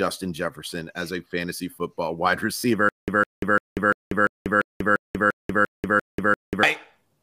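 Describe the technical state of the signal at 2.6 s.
At 2.59 to 2.64 s, just after "a fantasy football wide", there is a Bluetooth stutter: late or lost packets made the receiver replay its last buffer for about 44 ms, a brief buzzy repeat rather than a silent dropout, before the sound resumes further on.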